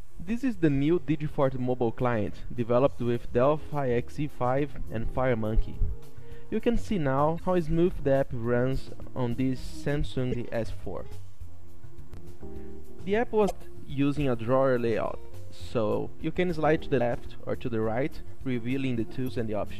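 Five brief glitches at 7.36–7.40, 10.31–10.35, 13.47–13.51, 16.97–17.01 and 19.24–19.28 s come from damaged data in a compressed stream. The decoder misreads corrupted frames and resyncs.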